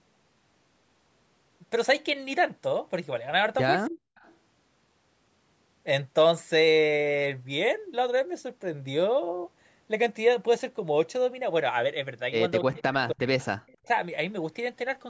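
A speech recording, band-limited to nothing above 8 kHz by the call's normal microphone processing, in which the talker's voice drops sharply, by roughly 40 dB at its deepest, at 3.88 to 4.01 s, across 12.62 to 13.33 s, and again at 13.78 to 13.9 s. This is likely speech suppressed in double talk: with both sides speaking at once, the echo canceller could not tell this talker apart from loudspeaker echo and turned everything down. Faint delayed copies of the voice played over the loudspeaker also appear, 273 ms late, at 4.15 to 4.35 s, 12.77 to 12.82 s, 13.39 to 13.46 s and 13.67 to 13.77 s. They range from very quiet, around 35 dB below the speech, to about 20 dB down near 12.8 s. That fixed delay likely marks an echo leak, where a loudspeaker's output reached a microphone and the canceller failed to remove all of it before sending it back.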